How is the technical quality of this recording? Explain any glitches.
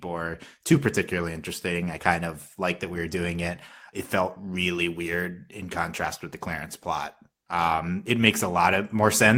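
No glitches or technical faults can be heard here.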